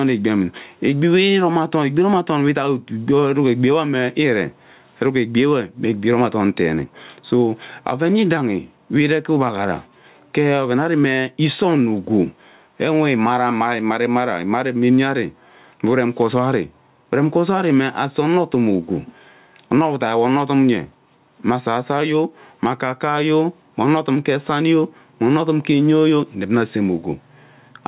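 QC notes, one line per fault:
Throughout, gain pumping: level swings around 10 dB, pulling loud and soft speech closer together, likely from excessive mic gain driving a fast limiter.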